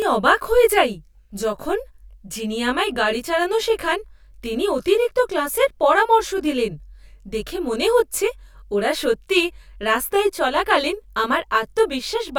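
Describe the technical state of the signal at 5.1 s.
At 5.1 s, as across the whole clip, one channel arrives late by around 20 ms, and when the two are folded to mono the shared speech content cancels at regularly spaced frequencies. This is channel delay (comb filtering): the first notch sits low, around 30 Hz, with further notches at even intervals up the spectrum. The voice comes across rough and slightly doubled.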